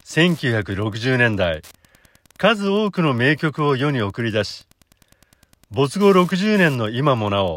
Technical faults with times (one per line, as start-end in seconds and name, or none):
0.00-7.57 Wi-Fi interference